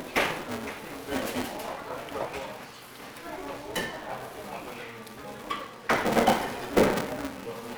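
A steady buzz at about 345 Hz rides under these everyday sounds for the whole clip, rising and falling with their level. That's the signature of a filter restarted on every block: it drops its internal state at each block boundary and starts again from silence, so every block opens with a tiny transient. Those ticks land regularly enough to fuse into a tone, and the rate fits a 128-sample block.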